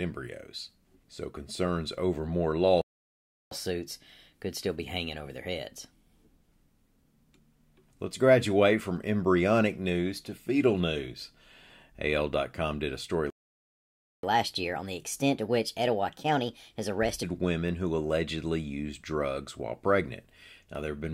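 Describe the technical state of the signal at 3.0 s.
At 3.0 s the output is inside a playback stall running from 2.81 to 3.51 s, about 0.7 s of silence. The speech cuts off mid-flow, then resumes. The likely cause is the player running short of data or its thread being blocked.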